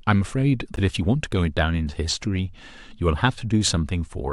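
At 0.76 to 0.79 s and again at 3.18 to 3.21 s, a corrupt frame was decoded: damaged bits put energy at wrong frequencies, giving short chirpy bursts. The first, fitting about two frames, is loud; the second is quieter. Spectrograms show brief energy at misplaced frequencies.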